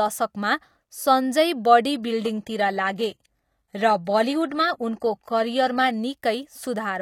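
An adaptive stream at a lower bitrate runs from 1.92 to 5.92 s, just after "सञ्जय बडी". The connection slowed, so the speech's treble suddenly turns synthetic and codec artefacts rise, with no gap. This fits a switch from 96 kbit/s AAC-LC to 20 kbit/s HE-AAC.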